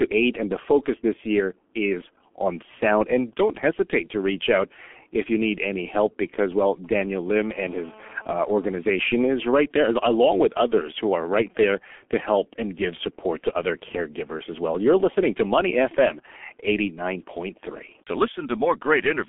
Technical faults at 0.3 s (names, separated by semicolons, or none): G.723.1 codec